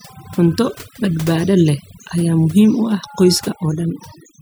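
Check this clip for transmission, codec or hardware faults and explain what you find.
The problem here is overdone noise removal across the whole speech clip. A noise reducer set too aggressively is clamping individual frequency bands whenever they sit near its noise estimate, so the background drops and breaks up into twinkling specks, and the voice loses its quieter detail, which gets stripped away too.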